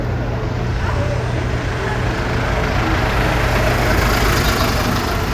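No technical faults can be heard anywhere in the audio; the signal stays intact and continuous throughout.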